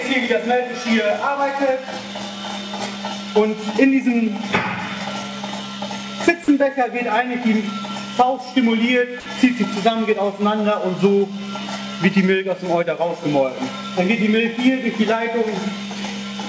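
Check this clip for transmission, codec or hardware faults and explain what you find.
Two brief dropouts, heard over a G.722 call path with nothing above 8 kHz. At 6.44–6.48 s and 9.20–9.26 s, sound gives way to steady noise or near silence. This is likely sound dropped by the voice detector, which the receiver filled with comfort noise, losing about 20 ms and 40 ms.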